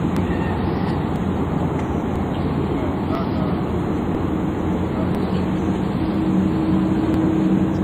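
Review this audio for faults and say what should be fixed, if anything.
Periodic USB or driver dropouts tick from 0.17 s to 7.14 s, about once per second. Each one skips a couple of milliseconds of audio, so the sound jumps ahead. Prevent this by stopping the background task that stalls the USB bus or audio driver, or by raising the buffer size.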